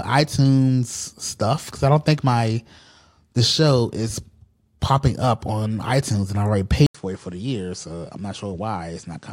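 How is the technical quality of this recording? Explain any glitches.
One fault spoils the speech. At 6.87 s, after an 80 ms gap, the input likely switched to a poorer device. Highs stop near 10.2 kHz, level drops about 5 dB, and new noise appears.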